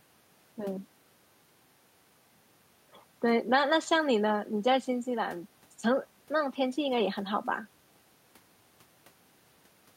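No technical faults are audible.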